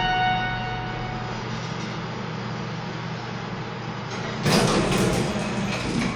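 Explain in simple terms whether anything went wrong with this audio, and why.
Nothing went wrong here: the recording of sounds comes through intact, with no technical problem to be heard anywhere in it.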